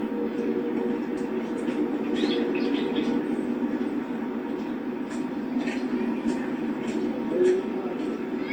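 From start to finish the audio carries generation loss: a swirling, smeared, hollow texture with softened, blurred attacks, more degraded than a single lossy pass would leave. The likely cause is repeated decoding and re-encoding through the Opus codec, around seven passes at a setting consistent with 64 kbit/s. Each pass requantises on a shifted frame grid, so noise accumulates. Content still extends to about 20.1 kHz.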